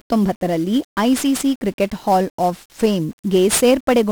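From start to finish the speech is fuzzy and crackly, with strong broadband hiss swamping the treble. That is 1-bit DFPWM compression: each sample keeps a single bit nudging an adaptive level up or down, and the coarse, heavy quantisation noise fits a rate near 48 kbps.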